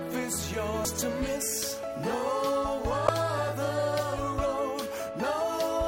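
Two short bursts of damaged data in a compressed stream break up the audio. The first is a brief blip at 0.85 s. The second is a longer glitch from 3.06 to 3.09 s. In each case, corrupted bytes in the encoded stream leave the decoder unable to read the affected frames correctly. It loses frame sync and outputs a glitch until it finds the next valid frame header and normal decoding resumes.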